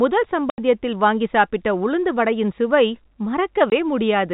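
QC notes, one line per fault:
0.50–0.58 s and 3.70–3.72 s, packet loss filled with silence: the sound drops out completely for 80 ms, then for 20 ms, with abrupt edges. Both gaps are multiples of 20 ms, which fits 20 ms packets lost and replaced with silence inside the 4 kHz G.711 telephone band.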